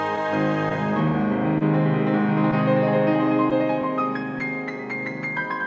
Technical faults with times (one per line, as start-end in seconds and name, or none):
0.00-5.67 clock drift between sender and receiver
1.58-1.63 short stall from a late packet